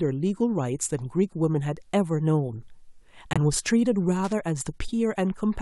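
At 3.33 s the speech drops into sudden silence until 3.37 s. This is a corrupt frame muted. Damaged data made the decoder reject a compressed frame, and the player filled the gap with silence. The hole lasts about 41 ms, which fits one lost frame. Timing stays intact.

At 4.24 s loose connector crackle breaks in and runs to 4.33 s. A worn or dirty contact is making and breaking rapidly. That chops the signal into a short, irregular burst of scratchy crackle lasting about 83 ms.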